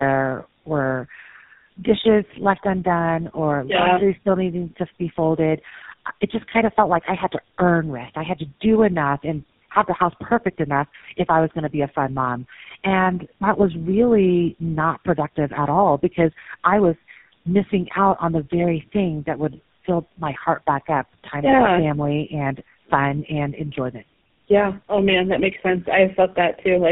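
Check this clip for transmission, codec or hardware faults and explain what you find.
There's one fault, and it runs through the whole clip: tandem speech coding. The sound seems to have passed through three speech codecs in a row, likely AMR-NB twice and then GSM full rate, each one re-encoding the previous one's already damaged output. The errors stack up, so the speech comes out rough, muffled and warbly, with nothing above about 3.7 kHz.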